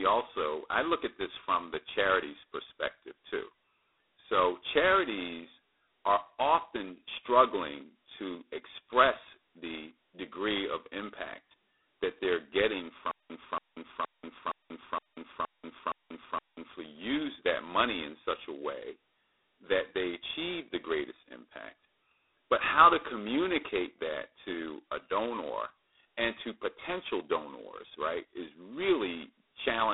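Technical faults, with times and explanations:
Throughout: G.726 ADPCM. The speech runs through this codec at 16 kbit/s, which means just 2 bits per sample describing the difference from a predicted value. That's too coarse to track the waveform, so you get a harsh, rasping hiss that swells and fades with the talker's level. The band is squeezed to roughly 300 to 3700 Hz, and nothing gets through above 3.9 kHz, so it sounds thin and boxy, like a cheap telephone line.
13.11 to 16.73 s: stutter with silent gaps. Right after "impact that they're getting", a 280 ms fragment of speech plays, drops to about 187 ms of dead digital silence, then comes back. It repeats 8 times on a steady 0.47 s cycle before picking up at "use that money in". The likely cause is a stalled player or stream replaying its last buffered chunk on each retry and then running dry. Whatever should have been heard in those few seconds is gone.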